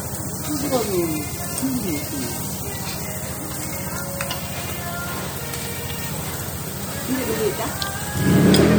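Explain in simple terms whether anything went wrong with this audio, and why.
Yes, something went wrong. The whole clip has a watery, swirly quality. This is plainly audible throughout. It is likely MP3 compression: to save space, the encoder dropped faint details, which flicker in and out.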